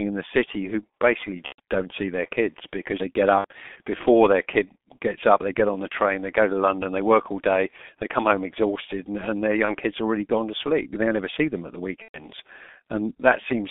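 G.723.1 codec damage runs through the whole speech clip. The audio sits in a telephone band of 200 Hz to 3.5 kHz, and the heavy coding fits the codec's low-rate mode of about 6.3 kbit/s. It works in 30 ms frames and updates its voice model slowly, so the result is muffled and hoarse, with consonants smeared and edges blurred.

VoIP packet loss concealed by the speech codec occurs four times. The first is at 1.46 to 1.60 s, between "the city who basically" and "don't see their kids". The next is at 3.38 to 3.45 s. The third is at 9.66 to 9.76 s, between "exhausted and and their" and "kids already gone to". The last is at 12.02 to 12.23 s, after "see them at the". The gaps fit runs of one to four 30 ms frames. The decoder carries on its last pitch and filter with falling gain, giving a buzzy, fading stretch of sound. The voice stays weak briefly after packets resume.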